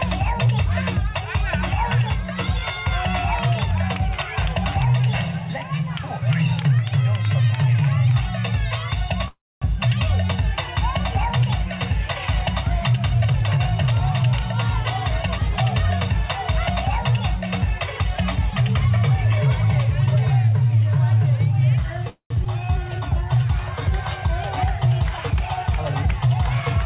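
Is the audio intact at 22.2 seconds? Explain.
No. From 22.10 to 22.32 s there's a call audio freeze, likely from delayed packets draining the jitter buffer. The last sound is stretched into a fading buzz or hiss, then about 0.1 s of silence, before the audio picks up where it left off, nothing lost.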